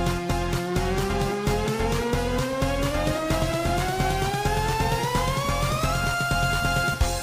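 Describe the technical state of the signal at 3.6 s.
At 3.6 s the signal is intact, with no dropout, distortion, glitch or other technical fault to be heard at that point.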